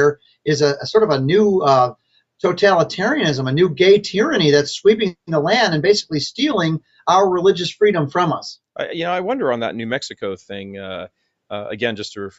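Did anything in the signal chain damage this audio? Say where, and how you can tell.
No, nothing in the signal chain damaged this audio. Nothing is heard above 8 kHz, which fits a normal call path with microphone processing and an Opus codec limited to wideband, likely running at around 64 kbps.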